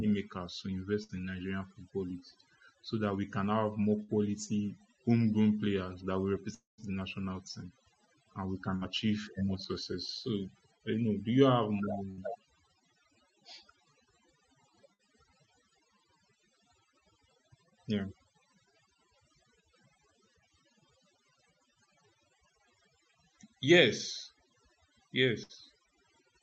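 Speech, heard through a call codec whose top end stops near 8 kHz, carries overdone noise removal from start to finish: the suppressor was set so strong that it pulls individual frequency bands near its noise estimate far down. The background becomes near silence with twinkling specks, and the quieter parts of the voice are eroded. Six bursts of packet loss occur, at 1.03–1.12 s, 4.03–4.11 s, 8.76–8.84 s, 12.11–12.20 s, 14.93–15.02 s and 25.43–25.52 s. In each, about 60 ms of audio is missing. The receiver covers roughly 54 to 62 ms of it by extending the last sound as a fading buzz or hiss, then resumes further on. At 6.54–6.81 s a longer gap of about 240 ms sounds like a concealed tail that decays into roughly 170 ms of silence before the speech returns past the lost section, likely a long network dropout.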